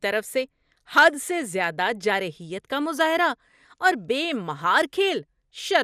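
Throughout, the speech sounds dull and gurgling, with granular grit and flickering highs. This is likely MP2 compression starving upper sub-bands of bits, which fits a rate around 80 kbps.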